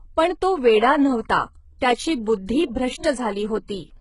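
HE-AAC compression, throughout the clip: the treble is likely rebuilt by spectral band replication rather than coded, so s sounds turn gritty and metallic, with heavy damage that fits a bitrate near 12 kbps, and nothing survives above 11.1 kHz.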